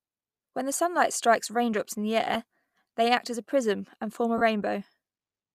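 At 2.34 to 2.36 s, just after "strikes raindrops in the", and again at 4.38 to 4.41 s, after "prism and form a", lost LE Audio frames break the speech. About 15 ms and 30 ms went missing, which fits two and four 7.5 ms frames of the light LC3 coding. The decoder fills each gap by reusing the last spectrum with scrambled signs, so the speech smears into a brief noisy hiss. On a spectrogram each gap shows as a blurred vertical band with no harmonic lines. The waveform stays filled there but loses its periodic shape.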